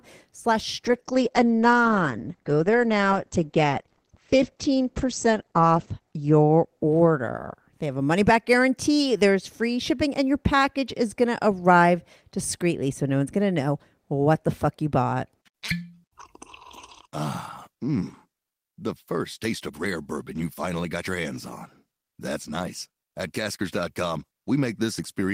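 A call bitrate drop from 0.87 to 8.39 s muffles the speech. Audio above 8 kHz vanishes and the coding turns rough, which fits the encoder falling from about 32 to 11 kbps.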